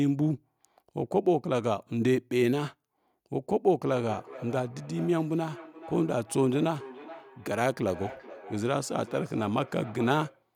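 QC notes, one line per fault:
3.9–10.48 s, feedback echo between two devices: each word returns at a steady interval of roughly 0.4 s, peaking at about 17 dB below the direct speech, with a thinner, ringing quality. A second device in the same room is playing back this talker's audio, and the microphone picks that playback up and sends it again. The local echo canceller only models its own loudspeaker output, so it does not remove this path, and the loop delay sets the repeat spacing.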